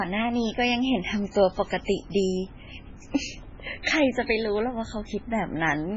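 It's a speech recording, and the whole thing sounds watery and swirly with nothing above 7.6 kHz, likely heavy MP3 compression at a very low bitrate, around 16 kbps. Around 3.83 to 3.85 s there's pre-echo: a short hiss of about 22 ms smeared ahead of a sharp attack, as quantisation noise spreads across the block.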